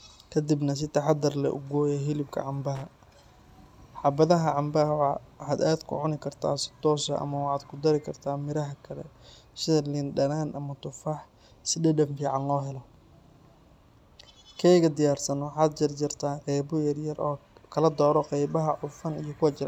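Right after "leh u gooyaa hilibka", from about 2.75 to 3.07 s, there's a burst of loose connector crackle lasting roughly a third of a second. It's the sound of a contact somewhere in the chain that isn't seating properly, so the connection keeps flickering on and off as it moves. That chops the speech into ragged fragments, and any DC sitting on the line turns each break into a little pop, giving that uneven scratchy rasp.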